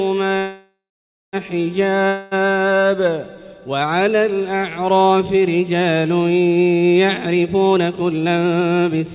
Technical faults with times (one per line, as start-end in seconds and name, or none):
0.38-1.36 call audio freeze
2.08-2.34 long network dropout
7.26-9.10 jitter buffer speed-up